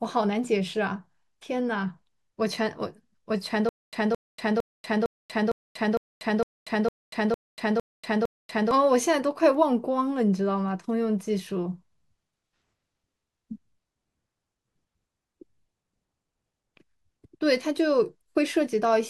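From 3.69 to 8.71 s the speech hits a stutter with silent gaps: a 218 ms fragment repeats 11 times, each followed by 239 ms of dead silence, so it pulses every 456 ms. The likely culprit is a stalled stream replaying its last chunk, and the speech from that stretch is gone.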